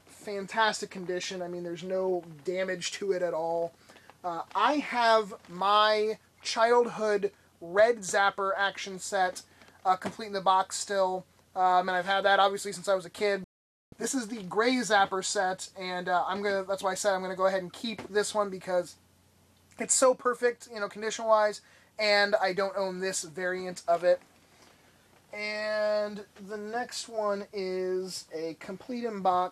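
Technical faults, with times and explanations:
13.44 to 13.93 s, digital broadcast dropout: the sound cuts abruptly to silence for about half a second (480 ms) and then resumes further along, with nothing of the intervening material recovered. The receiver stopped getting usable data, either losing the signal or rejecting frames that failed their checksum, and muted its output until valid frames arrived again. A gap of this length suggests a run of around twenty consecutive lost frames.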